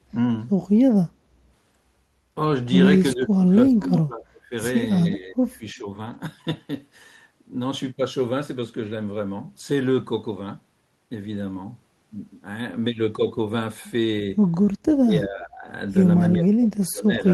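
At 3.14 s the speech sinks sharply, by roughly 30 dB at its deepest, and stays uneven until 4.52 s. It happens again from 5.16 to 5.89 s. The likely cause is speech suppressed in double talk. The far side was talking at the same moment. The echo canceller mistook this talker for loudspeaker echo and turned everything down.

From 6.05 to 6.15 s, about 60 ms of speech turns grainy and noisy. There is no silence. This is a lost packet rebuilt from error correction. The span fits about three lost packets. Each was replaced by the low-bitrate copy carried in the packet that followed it. That copy holds less detail, so the audio roughens.

The suppression returns from 14.88 to 15.68 s, dipping about 20 dB. From 16.27 s it drops about 30 dB and lasts to the end of the clip.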